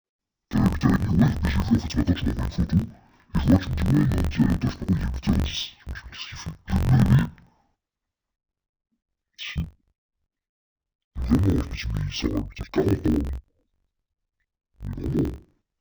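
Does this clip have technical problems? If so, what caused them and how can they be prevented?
Yes. The speech has an interleaved-audio-read-as-planar fault the whole way through. Each block of about 21.3 ms, which fits a 1024-sample block, had its alternating left/right samples split into a first half for left and a second half for right. Each half plays at half speed, so the voice drops a full octave and sounds doubled, with a choppy flutter at roughly 47 Hz, while the overall pace stays normal. To prevent it, make sure the reader's channel layout flag matches the buffer's actual format (interleaved versus planar) before handing blocks to the decoder or mixer.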